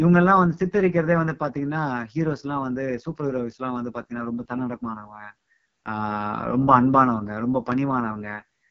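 From start to finish the speech carries AMR wideband (HD Voice) codec damage, and it is heavy. The sound is rough and raspy. Its grainy, buzzy texture fits the codec's lowest mode, around 6.6 kbit/s. At that rate the pulse-driven vocal tract model has too few bits to track the voice closely. The top band is filled with shaped noise, not real detail. Nothing is heard above about 7.6 kHz.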